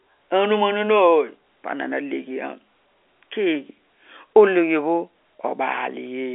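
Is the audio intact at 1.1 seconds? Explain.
Yes, the audio is intact at 1.1 seconds, with nothing there beyond the narrow band of the G.711 telephone coding, which leaves nothing above about 3.8 kHz.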